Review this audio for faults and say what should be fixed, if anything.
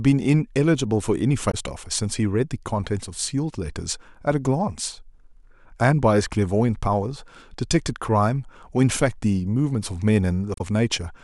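Damaged data in a compressed stream occurs twice, from 1.48 to 1.55 s and from 10.54 to 10.61 s. At each point some of the encoded bytes are wrong, so the decoder misreads those frames and loses sync until it finds a valid frame header again. What comes out is a short disturbance of about 70 ms: a chirp, squawk, click or short hole in place of the intended signal. To prevent it, carry the stream over a transport with integrity checks or retransmission, and verify file checksums after copying.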